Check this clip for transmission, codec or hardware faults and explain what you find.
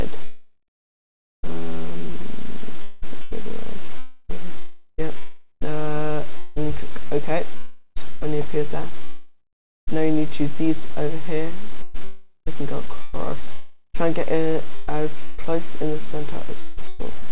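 Two kinds of fault are present: voice-detector chopping throughout the clip and four long network dropouts, all heard through a narrowband call path with nothing above 4 kHz, consistent with G.711 mu-law at 64 kbps.

Sound chopped by the voice detector, from 0.24 s to 17.24 s, with a denser patch at 4.58 to 5.63 s: the sender's voice activity detection is likely switching transmission off and on, substituting RFC 3389 comfort noise. About 3 s of the clip is replaced across the whole span, and a further 0.83 s in the denser patch. Quieter portions and edges of sounds drop out, so the audio sounds choppy.

Long network dropouts occur at 7.57 to 7.98 s, 9.04 to 9.89 s, 12.04 to 12.48 s and 13.52 to 13.96 s. Packets likely stopped arriving, about 0.4 s each time and about 0.84 s in the second gap. The receiver's concealment stretches the last sound into a fading buzz, then falls briefly silent. 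That silence is longest at 9.04 s, nearly half a second. The audio then resumes further on, with the lost portion simply gone.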